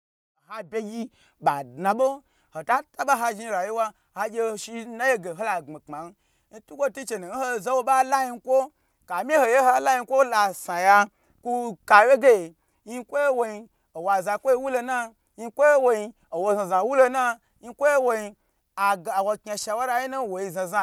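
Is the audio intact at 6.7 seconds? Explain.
Yes, the audio is intact at 6.7 seconds, with no fault at that point.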